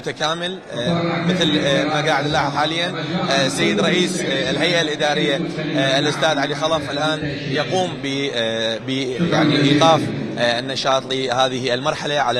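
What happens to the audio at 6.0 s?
Nothing goes wrong at 6.0 s; the audio runs through that moment intact, with no dropout, click, glitch or other fault.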